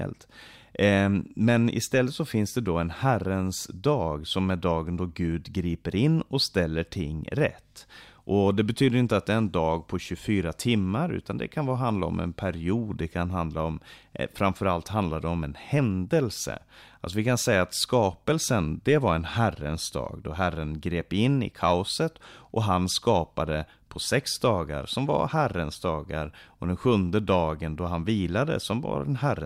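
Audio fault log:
28.59 s, dropped samples: a single sharp click just after "sjunde dagen då han". Likely a couple of samples went missing, making the waveform jump.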